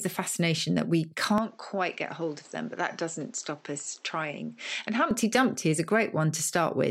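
At 1.38 s, after "the fascination that we", the speech turns duller and quieter, with nothing above 8 kHz and added noise. This is likely an input switched to a poorer device, lasting until 5.11 s.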